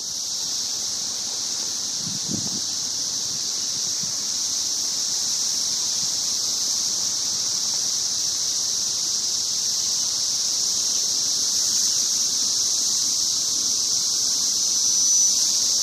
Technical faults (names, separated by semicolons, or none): loudspeaker feedback squeal